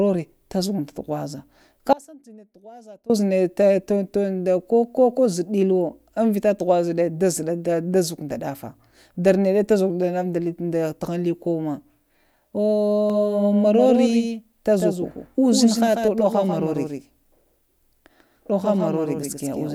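Speech, with an audio dropout to a faint residue from 1.93 to 3.10 s: the signal cuts abruptly to a leak roughly 25 dB down, likely a break with the path still live, not a pause or fade. From 13.10 s to the end, a doubled audio track adds a clean copy a few dB quieter, about 150 ms late, with no decay, unlike echo or reverb.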